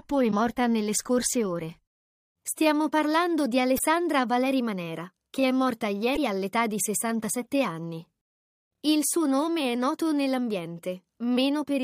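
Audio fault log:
0.28–0.33 s, 3.75–3.81 s, 6.13–6.18 s: damaged data in a compressed stream. Each event is a brief chirp or blip, about 56 ms long, cutting across the sound. At these three points the compressed data is corrupted, so the decoder cannot read the affected frames correctly. It produces garbled output until it finds the next valid frame header and locks back into sync, leaving a short, foreign-sounding burst.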